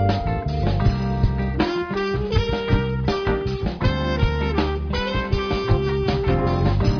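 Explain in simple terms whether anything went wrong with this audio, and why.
Nothing went wrong here that I could hear; listening through the whole clip, nothing stood out as a problem.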